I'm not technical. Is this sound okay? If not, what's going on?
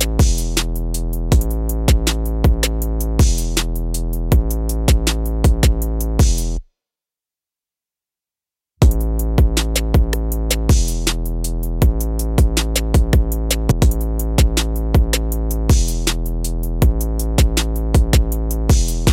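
No. At about 13.70 s the sound suddenly jumps ahead with a tiny blip, as if a chunk was cut out. That's a stream segment skipped: one piece of the stream likely failed to load, and the player simply carried on with the next.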